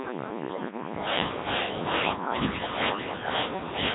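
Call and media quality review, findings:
Codec 2 vocoder, whole clip: robotic, buzzy speech with heavy vocoder damage. Decoder rebuilds sound from sine waves using only pitch, voicing, energy and spectral envelope, so the waveform is lost. Timbre is consistent with the 1.3 kbit/s mode.

Bit errors on digital voice radio, 0.49 to 0.77 s: abrupt pitch, level and tone-colour jumps breaking into warbly gibberish. Flipped bits at a rate of a few percent corrupt per-frame vocoder parameters, with five frames hit.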